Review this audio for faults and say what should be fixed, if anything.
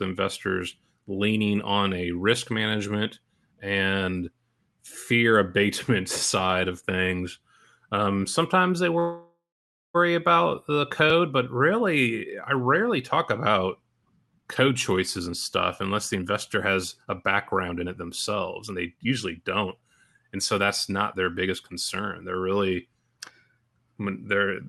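A call audio freeze most likely occurred: packets were held up and the jitter buffer ran empty at 8.99 to 9.96 s. After "things um sometimes they", the last sound is drawn out into a fading buzz, followed by about 0.55 s of silence. The audio resumes at "about the code but", 0.95 s late but with nothing lost.

Jitter buffer speed-up followed as the buffer, overfilled after that delay, cut short pitch-period pieces to catch up. The speech runs faster at unchanged pitch and sounds hurried: 14.22 to 14.72 s at 138% (roughly 0.2 s removed), 15.18 to 15.33 s at 134% just before "stuff unless the" (about 50 ms), and 16.15 to 22.01 s at 112% after it (about 0.7 s).

The Opus call path, at 32 kbps with a 12 kHz bandwidth, shows its ordinary coding character. To prevent these faults, fix the network path that stalls packets and let the jitter buffer drain back to its target more gradually rather than in long, hurried stretches.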